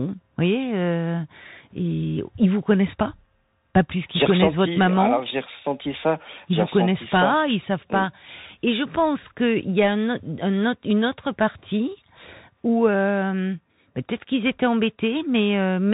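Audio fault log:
throughout, Bluetooth CVSD headset codec: the speech went through a one-bit delta coder whose adaptive step lags loud, fast-changing sound, so sibilants turn scratchy and a granular hiss sits underneath, while nothing above about 3.8 kHz survives, which fits a 64 kbps narrowband headset link.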